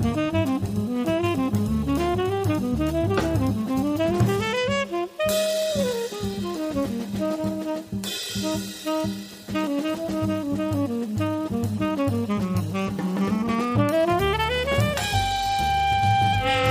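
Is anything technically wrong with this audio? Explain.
No, nothing technically wrong can be heard here.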